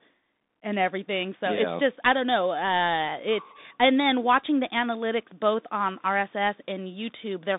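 Throughout the clip, the speech runs through a Bluetooth CVSD headset codec. It passes only 0.2 to 3.7 kHz, with nothing above 3.8 kHz. One up-or-down bit per sample, with an adapting step, fits a 64 kbps link. The coding damage is plainly audible.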